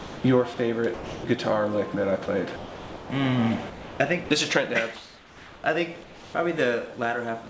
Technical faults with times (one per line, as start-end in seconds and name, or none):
0.00-0.24 sound dropped by the voice detector
0.54-0.58 sound dropped by the voice detector
0.94-1.24 sound dropped by the voice detector
2.26-2.28 sound dropped by the voice detector
2.56-3.10 sound dropped by the voice detector
3.70-4.30 sound chopped by the voice detector
4.96-5.64 comfort noise in place of the background
6.04-6.34 comfort noise in place of the background